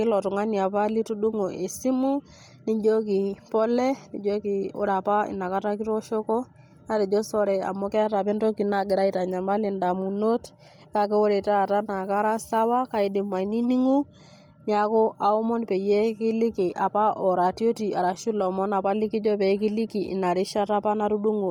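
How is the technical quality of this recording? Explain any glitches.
The recording's quality is limited by heavy codec damage that runs through the whole clip. Throughout, the speech carries a breathy, grainy edge, likely from Bluetooth LC3 compression at a rate that fits about 32 kbps. The codec drops much of the upper spectrum and refills it with noise in 10 ms blocks. On a spectrogram, the high bands look blotchy and patchy frame by frame, with nothing above 20.2 kHz.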